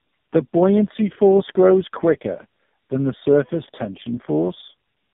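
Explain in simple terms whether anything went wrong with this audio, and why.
Something did go wrong, and it lasts the whole clip: tandem speech coding. The call passed through several phone networks, each squeezing the speech with its own codec, so the audio was unpacked and squeezed again at every handover. Each pass added damage on top of the last. The result is speech that sounds rough, muffled and warbly, with nothing above 3.7 kHz. The damage fits about three speech coders in a row.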